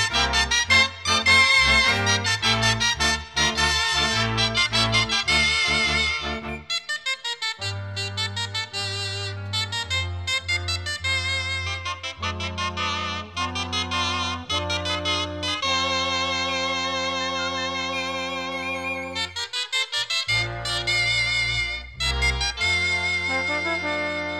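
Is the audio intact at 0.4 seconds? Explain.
Yes, at 0.4 seconds the audio plays through cleanly, with no dropout, click, distortion or other fault to be heard.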